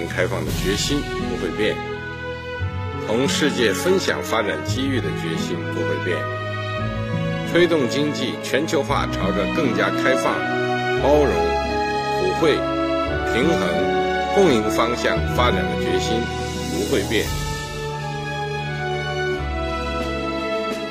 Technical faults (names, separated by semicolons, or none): adaptive stream starting at a low bitrate